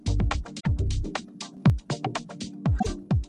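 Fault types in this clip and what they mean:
Damaged data in a compressed stream: a brief garbled burst breaks the sound at 0.56 to 0.67 s and again at 2.76 to 2.87 s. Corrupted bytes there made the decoder misread those frames, lose sync and hunt for the next valid frame header.
Sudden gain jump: at 1.57 s the whole signal, background noise included, steps up by about 6 dB with no fade, over a span ending at 1.70 s. The likely cause is a digital gain change applied between samples without a ramp.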